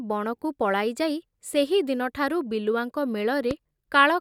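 At 3.51 to 3.53 s a single loud pop sits on top of the speech, peaking roughly 10 dB above it, likely from a voltage pulse such as static or a switching glitch. The waveform shows a tall narrow spike, the spectrogram a thin full-band vertical stripe, with the speech continuing underneath.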